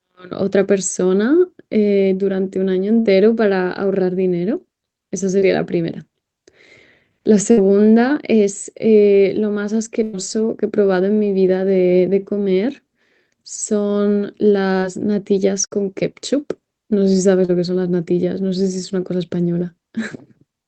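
At 2.99 to 3.07 s the speech locks onto a held buzz or hiss that sinks in level and then jumps ahead with a piece gone. This is a burst of packet loss: about 60 ms of audio arrived too late or not at all, so the receiver kept extending the last sound while fading it, then picked up the stream beyond the hole. The same effect returns at 7.51 to 7.59 s and 15.66 to 15.73 s, each losing about 60 ms. The longest comes at 10.03 to 10.15 s, where 100 ms is missing and the fill lasts noticeably longer before the jump.

Between these, a quicker smear or wobble passes at 5.39 to 5.43 s, again at 14.79 to 14.84 s, and at 17.45 to 17.50 s. These are short concealed packet losses of about 20 ms at the first two and 40 ms at the third. The decoder bridged each hole by continuing the preceding sound, pitched if voiced and as shaped noise if not, then crossfaded back into the real signal. A brief consonant can disappear inside such a patch. 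All of this passes through the Opus call path, whose audio band stops at 8 kHz.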